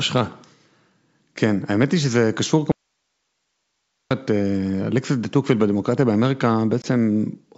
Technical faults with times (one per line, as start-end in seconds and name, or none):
2.72-4.11 audio dropout to a faint residue
6.82-6.85 packet loss on an ADPCM call